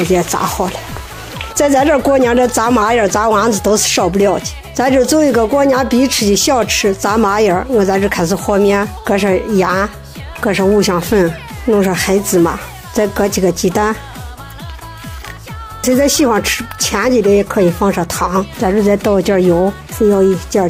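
At 11.07 s the sound abruptly slows and drops in pitch, then snaps back at 11.65 s. For just over half a second, playback runs about 5.5% slow and sits close to a semitone flat, around 97 cents down. Speed and pitch move together, so the passage sounds detuned and dragged. This is likely a drift correction step. Clock-matching software shifted the playback rate in one jump to rebalance its buffer, then restored it.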